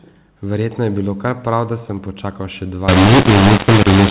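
From 2.88 s to 4.10 s the speech turns harsh and gritty, its loudness lurches unevenly, and the pauses fill with hiss. This is mu-law and A-law mixed up: telephone audio coded as mu-law is being decoded as A-law, which scrambles every sample level.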